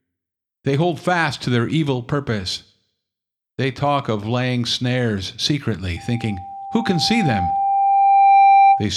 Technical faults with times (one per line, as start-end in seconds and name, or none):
5.97-8.89 loudspeaker feedback squeal